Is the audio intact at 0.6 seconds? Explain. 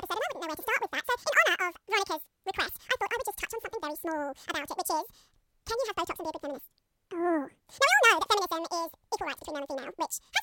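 No. A wrong sample rate affects the whole speech clip, including 0.6 s. Audio recorded at 24 kHz plays at 48 kHz, so it runs twice as fast and a full octave high, sounding squeaky and rushed.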